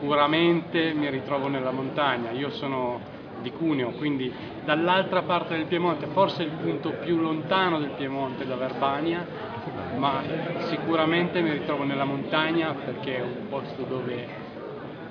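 Nothing in the audio comes across as a technical fault, so there's really nothing here to point out.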